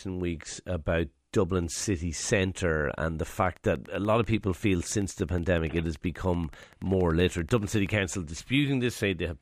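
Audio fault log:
3.46 to 7.87 s: train of clicks, starting just after "city centre and the" and running for about 4.4 seconds over the speech. It's a steady ticking at 10.5 clicks per second, evenly spaced, around fifty in all, each with much the same shape and peaking roughly as loud as the speech itself, so they sit right on top of it rather than hiding underneath. The regular pace and near-identical pulses point to something outside the sound, likely interference from nearby equipment or a faulty connection or power supply.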